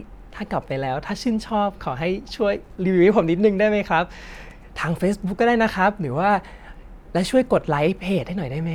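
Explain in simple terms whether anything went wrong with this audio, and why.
Nothing went wrong that can be heard: listening through the speech, nothing stood out as a fault.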